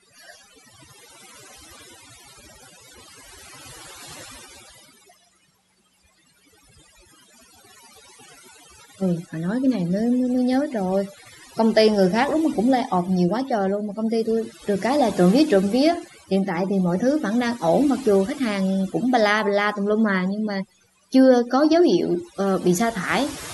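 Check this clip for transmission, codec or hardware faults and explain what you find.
The fault here is overdone noise removal, present throughout the speech. A noise reduction stage was set far too aggressively, so it pulls individual frequency bands down hard, or shuts them off, whenever their level sits close to what it takes to be the noise floor. Quieter parts of the voice fall under that threshold and get removed along with the noise. The gaps between phrases drop to near silence dotted with twinkling, chirpy specks.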